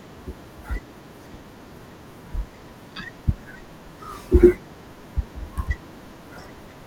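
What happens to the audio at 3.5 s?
At 3.54 s a compressed frame is skipped: one 21.3 ms frame of the encoded stream never reaches the output, so the audio jumps ahead by about 20 ms.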